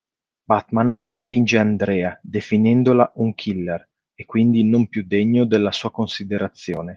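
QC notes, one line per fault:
0.87–1.35 s, long network dropout: the sound breaks off, and its final moment is stretched into a buzzy tail that fades to near silence for about 0.35 s. The audio then resumes with that stretch missing rather than delayed. This is likely a run of lost packets that the receiver concealed. A brief concealment glitch would be far shorter than this 0.46 s gap. A plain mute or cut would also lack the smeared, decaying buzz at the start.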